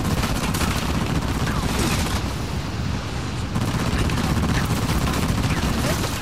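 From 1.54 s to 2.26 s the sound slows by 5.84% and drops 104 cents, about a semitone, then snaps back. This is likely a drift correction step in clock-matching playback. Unlike tape wow, the shift is abrupt and steady rather than wavering.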